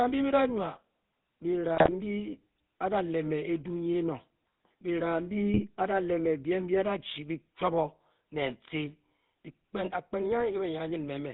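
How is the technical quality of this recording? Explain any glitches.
The recording has two audible problems: codec coloration throughout and two short bursts of corruption.

The whole clip carries the sound of the GSM full-rate codec, which fits a 13 kbps mobile call. The voice is rebuilt from a vocal-tract filter fed by a coarse, regularly spaced pulse excitation, and nothing above 4 kHz survives. That gives a steady buzzy, gravelly roughness. Unlike plain narrowband filtering, the grit sits inside the voice itself, not just in the missing treble.

GSM bit errors break in from 1.75 to 1.96 s and again, more briefly, from 5.54 to 5.61 s. Corrupted filter, pitch or gain values reach the decoder, so individual frames come out with a warped spectrum or a jump in level. The speech turns into squawks, pops and gargling. Unlike dropouts or packet-loss concealment, the sound is distorted rather than silenced or smoothly patched over.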